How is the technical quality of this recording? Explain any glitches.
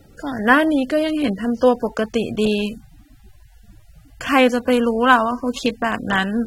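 Quality's held back by lossy coding the whole way through: the speech sounds dull and smeared, with nothing above 16.6 kHz, likely AAC compression at a low bitrate around 27 kbps quantising away detail.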